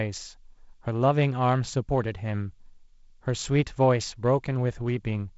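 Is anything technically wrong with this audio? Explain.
No, the speech simply carries the character of G.722 wideband telephone coding at 48 kbit/s: content reaches up to 7.7 kHz with nothing above it, and there is the light coding texture expected at that bitrate.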